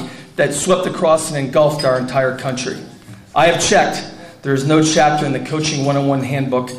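Nothing here stands out as a technical fault; the audio runs along without any dropouts, glitches or other problems to point to.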